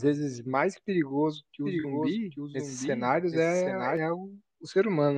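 A speech clip with two faults. From 1.65 s to 3.97 s there is a doubled audio track: a second, full-band copy of the speech runs roughly 0.7 s behind the original and about 5 dB quieter. It has no decay or room colour, and it cuts in and out abruptly, most likely from a slower second capture path or an edit holding two copies out of step. At 1.80–1.86 s a corrupt frame is concealed. The decoder detected damaged AAC data, which fits two frames, and covered the damage.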